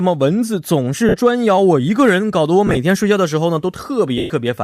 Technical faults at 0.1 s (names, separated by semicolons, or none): none